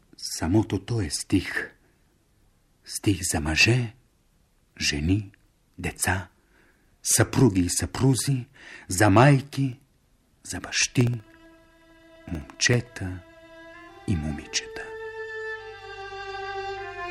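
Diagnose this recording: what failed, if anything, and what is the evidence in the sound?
Periodic USB or driver dropouts, 9.73 to 12.87 s: regular ticks every 64 ms as a background task stalls the driver, blanking about a millisecond of audio each time.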